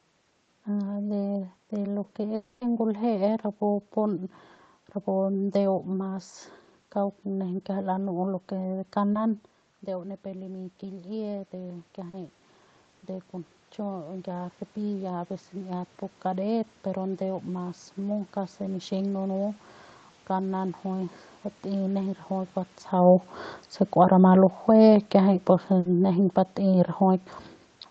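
At 2.35 to 2.63 s the sound continues as a fading buzz or hiss for about 260 ms, likely a long network dropout. The concealment stretches the last sound rather than leaving a brief tick, and that stretch of audio is lost.

From 8.69 to 19.02 s, just after "lanu'u lo ke", automatic gain rising lifts the level by about 9 dB, compensating for an input that dropped by about 11 dB. Voice and background swell together slowly, unlike a talker moving closer.

Within that swell, short concealed packet loss at 9.13 to 9.17 s and 12.09 to 12.15 s leaves brief smears of 20 and 40 ms, far shorter than the earlier fill.

Between 22.92 and 27.32 s, automatic gain falling lowers everything by about 4 dB. The background sinks along with the voice, which separates it from a talker leaning away.

At 25.79 to 25.87 s, a burst of packet loss replaces 60 ms with a held, dimming continuation. It is longer than the earlier smears and audibly fades.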